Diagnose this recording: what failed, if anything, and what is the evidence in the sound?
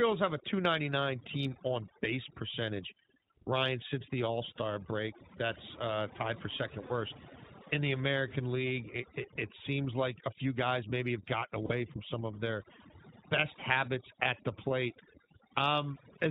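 Overdone noise removal sits in the call processing stage. The background drops, dotted with twinkling specks. The suppressor is set too hard, so bands near its noise estimate are cut off, and quiet speech detail goes with them.

The iLBC codec damage is audible throughout, at the codec stage. Nothing passes above 4 kHz, so the speech is narrowband and muffled at the top. It also sounds slightly rough and synthetic. The codec runs in iLBC's 20 ms frame mode, coding the excitation of each frame on its own.

Lost iLBC frames come from the network stage. The first loss is at 6.86 to 6.92 s, just after "tied for second". The second is at 11.66 to 11.72 s, between "guys maybe have gotten" and "from some of their". Each gap is a short, held, buzzy vowel about 40 ms long, which fits two lost 20 ms frames. The decoder repeats the last pitch cycle with added noise. The speech recovers almost at once.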